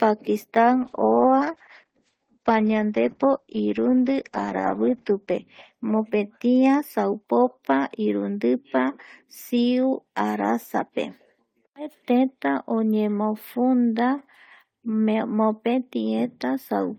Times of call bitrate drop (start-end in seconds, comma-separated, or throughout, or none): 0.77-6.61